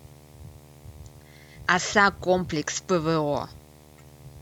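A speech recording carries video or display buzz from start to finish. A steady buzz sits under the speech, with a gritty hash riding above it. The buzz repeats at 75 Hz, which matches the field rate of a display refreshing 75 times a second. A screen or video cable near the audio path is coupling its picture timing into the signal. The buzz stays roughly 30 dB below the speech.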